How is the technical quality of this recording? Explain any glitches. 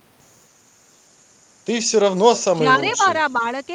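Two call-processing glitches occur close together in the last second and a half. The recording carries the band-limited sound of a call path whose top end stops near 12 kHz, consistent with Opus at around 32 kbps.

Echo leak, 2.36 to 2.43 s: a faint, delayed copy of the speech surfaces briefly, roughly 15 dB below the main voice and trailing it by about 277 ms. The likely cause is an echo canceller on a loudspeaker end that failed to fully remove what its microphone picked up from the speaker, so that residue was transmitted back along with the talker.

Speech suppressed in double talk, 2.48 to 3.01 s: the talker's level dips and pieces of the speech thin out or drop away, adding up to about a fifth of a second, with the deepest cut around 15 dB. This likely comes from the echo canceller facing simultaneous talk from both ends. Unable to separate its own talker from loudspeaker echo, it attenuated everything.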